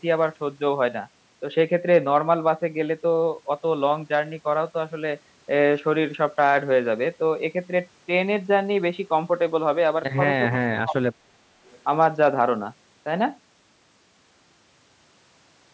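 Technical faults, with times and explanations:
10.49–11.34 s, speech suppressed in double talk: with both sides talking at once, the talker's level sinks by roughly 35 dB in pieces totalling about 0.7 s, likely the echo canceller mistaking speech for echo. The waveform shows chopped, shrunken envelopes and the spectrogram thins to gaps.
11.65–11.79 s, echo leak: a faint copy of the earlier voice returns 414 ms late, at roughly 30 dB below the speech, likely residue an echo canceller failed to remove. On a spectrogram it appears as a weak, brief, delayed repeat of earlier harmonic patterns.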